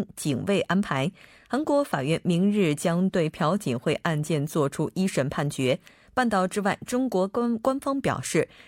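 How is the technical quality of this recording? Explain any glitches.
No technical faults are audible anywhere in this recording.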